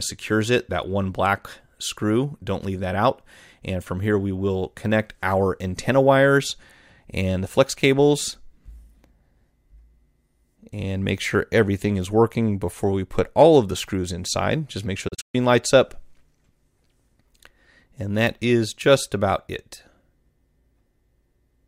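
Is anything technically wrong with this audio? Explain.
Yes. Digital broadcast dropout, 15.08 to 15.35 s: failed frames muted the receiver, leaving holes with 8 ms fades totalling 192 ms, the longest 128 ms.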